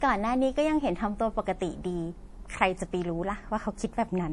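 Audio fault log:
Throughout: MP3 compression, likely the cause of a plainly audible watery, swirly quality in the speech. This fits a low bitrate around 48 kbps, where bits are scarce. Weaker frequency components are dropped and restored from one frame to the next, so the sound shimmers, s sounds turn metallic and chirpy, and consonant onsets lose their crispness and smear.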